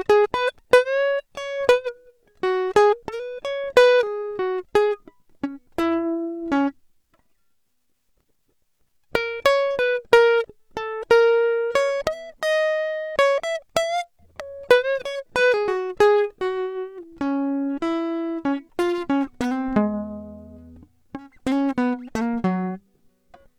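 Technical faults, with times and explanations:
No technical faults heard.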